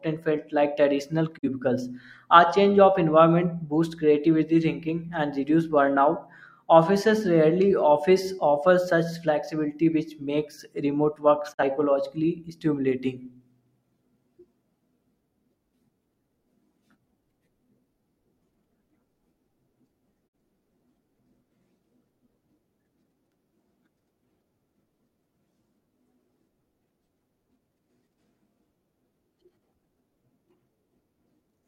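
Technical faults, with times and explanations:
1.37–1.48 s, 11.52–11.63 s and 20.27–20.35 s, digital broadcast dropout: The speech briefly cuts to silence three times, each hole lasting about a tenth of a second. The receiver stopped getting usable data, or a frame failed its checksum, so it muted until good frames arrived. Each gap fits a single lost frame of 42.7 ms. A 20 ms fade softens each edge. The sound then resumes further on, and the audio sent during each hole is gone.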